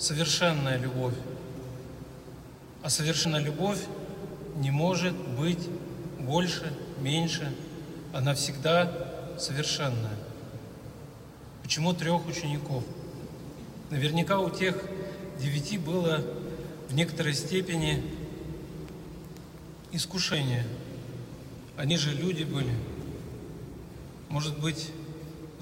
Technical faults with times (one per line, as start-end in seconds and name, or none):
3.25 compressed frames skipped
20.33 compressed frames skipped
21.90 compressed frames skipped